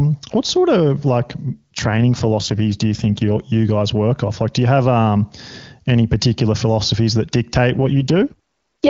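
After "what sort of like", from 1.51 to 3.40 s, and after "particular philosophies that dictate", from 7.76 to 8.89 s, an AMR rate drop roughens the speech, fitting a codec switch from 23.85 to 8.85 kbit/s. The spectrogram keeps its bandwidth without gaps, but harmonics smear into grainy noise.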